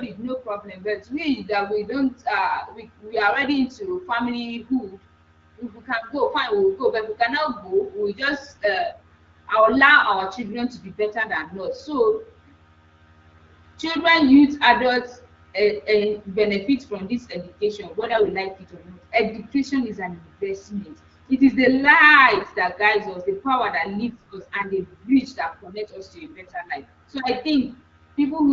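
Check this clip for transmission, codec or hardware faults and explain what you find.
Two short bursts of AMR bit errors are audible, at 18.00 to 18.30 s and at 22.36 to 22.56 s, within HD Voice speech that stays clear with only light coding roughness. The 0.3 s burst fits roughly fifteen damaged 20 ms frames.

AMR bit errors: flipped bits of a few percent in the less protected parts of each frame misplace the excitation pulses and skew the finer pitch, gain and spectral values. Level and pitch hold roughly steady, but the speech turns hoarse and gargly. A spectrogram shows smeared, noisy harmonics, and the waveform's envelope stays intact.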